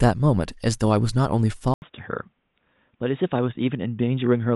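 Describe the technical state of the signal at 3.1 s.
At 3.1 s the speech is band-limited and dull, with nothing above 3.8 kHz, a level a few dB lower than before, and a faint new noise floor far below the signal. This state runs from 1.74 s to the end of the clip and follows an 80 ms silence at 1.74 s. The pattern most likely reflects the input being switched to a poorer device, whose narrower bandwidth, different gain and own self-noise replace the original microphone's character.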